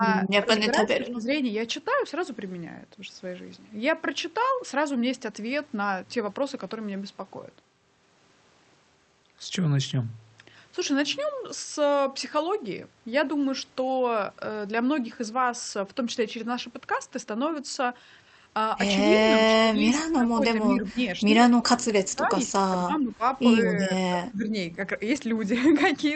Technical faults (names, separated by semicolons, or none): speech suppressed in double talk